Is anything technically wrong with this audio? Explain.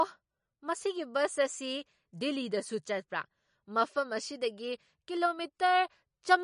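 Yes. MP3 compression artefacts run through the whole speech clip. Nothing is heard above 10.5 kHz, and the plainly audible watery, swirling texture is likely from an MP3 encoder that ran short of bits, which fits a low bitrate around 40 kbps. It cut the treble at a fixed point and dropped weak frequency components that flicker from frame to frame.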